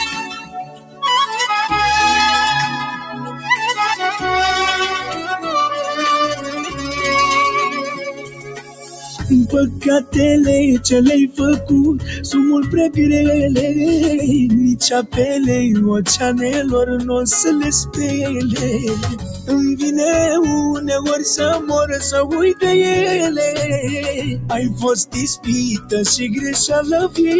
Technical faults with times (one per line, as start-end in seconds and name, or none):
0.00-27.40 noise suppressor applied to music or sounds
0.20-1.03 sound cut by the noise suppressor
2.96-3.48 sound cut by the noise suppressor
6.36-6.81 sound cut by the noise suppressor
7.94-10.14 sound cut by the noise suppressor
11.29-12.28 sound cut by the noise suppressor
15.02-15.18 sound cut by the noise suppressor
17.84-19.51 sound cut by the noise suppressor
20.77-27.18 sound cut by the noise suppressor